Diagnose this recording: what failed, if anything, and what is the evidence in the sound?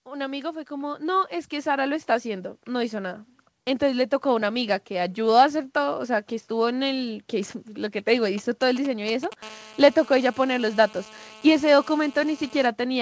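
Call processing first: the automatic gain is rising from 0.05 to 3.28 s. The speech and the room noise under it swell together by about 11 dB over those three seconds, as the gain control decides the input is too quiet and slowly winds itself up.

Then, from 8.38 to 9.34 s, there are GSM signalling bursts: a galloping dit-dit-dit of short 217 Hz buzzes, roughly 15 dB under the speech. That's a nearby 2G phone handshaking with the network, and the analogue wiring is rectifying its radio pulses into audio.

From 9.43 to 12.67 s the same phone settles into a call, and you get the steady GSM phone buzz: a hard, raspy 217 Hz tone full of harmonics, about 21 dB below the speech, unrelated to what's said. It's the same analogue pickup, now from continuous call bursts, and it survives the G.722 call path with its 8 kHz top end.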